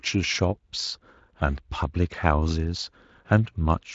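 Nothing here needs flagging: the speech comes over a Speex link at a fairly roomy 23.8 kbps, with the top end simply stopping around 7.6 kHz as that path would have it, and no faults turn up anywhere along the way.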